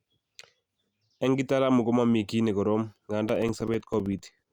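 From 3.29 s to 4.45 s, right after "komamii kiy ne korom", periodic USB or driver dropouts occur: every 64 ms a background task stalls the audio path and a few milliseconds are replaced by silence, giving about twenty evenly spaced ticks through the speech.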